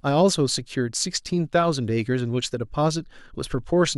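No technical fault can be heard anywhere in the speech. Nothing in the audio points to a problem in how it was captured, carried or played back.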